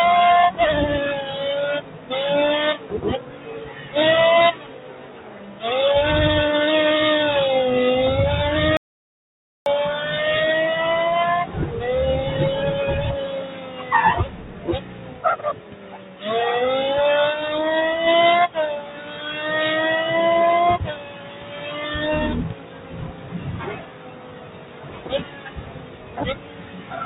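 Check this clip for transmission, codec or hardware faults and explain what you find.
Three faults are audible: a speech noise suppressor acting on non-speech sound throughout, repeated suppressor cuts, and one dropout to silence. The top end stops at 4 kHz, which fits the G.711 mu-law call codec.

A noise suppressor applied to music or sounds runs across the whole clip. Built for speech, it treats sustained tones and decaying tails as noise and pulls them down. Level swings of around 15 dB make the sound pump and thin out, while onsets pass.

Sound is cut by the noise suppressor at 1.8–2.11 s, 2.77–3.95 s, 4.54–5.63 s, 13.32–13.92 s, 14.25–16.25 s, 18.78–19.41 s, 20.89–21.83 s, and from 22.52 s to the end. In each span the held material sinks by up to about 10 dB and tails are clipped short.

An audio dropout to silence runs from 8.77 to 9.66 s. The sound stops abruptly and returns mid-flow after 892 ms of silence with no room tone. 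This likely came from the input being lost, such as a device disconnect or brief mute, while recording continued.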